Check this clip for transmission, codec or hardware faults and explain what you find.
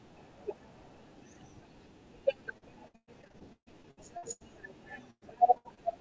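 Yes, there is one kind of fault: repeated packet loss (robotic sound), in two stretches of the speech. The sound turns choppy and robotic, with small pieces of speech dropping out. From 2.58 to 4.42 s there are more than a dozen short holes, the longest 139 ms, and about a third of that span is filled in rather than real. From 5.10 to 5.79 s there are four more holes, the longest 111 ms, with about 31% concealed. The cause is packets being lost or arriving too late, again and again. The receiver patches each hole by stretching the last bit of sound it had, and that smeared, repeated fill is what gives the robotic buzz. The call path itself carries nothing above 8 kHz, which fits a G.722 codec at 64 kbps.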